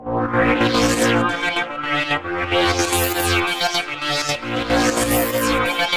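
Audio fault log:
Nothing stood out on listening to this music.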